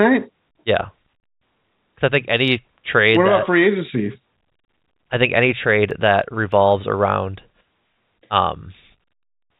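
At 1.2 s and again at 4.65 s the speech drops out for 30 ms each time. That's packet loss filled with silence. The receiver had nothing to play, so it inserted dead air, which fits a single lost 30 ms packet each time. Both gaps have hard edges.

At 5.91 s there's a repeated buffer. Fresh audio arrived late, so the device played its last 1.33 ms chunk once more, which fits a 64-sample buffer. Because the repeat is so short, you hear a tiny click rather than a stutter. Under all of this, the G.711 telephone band cuts everything off above 4 kHz.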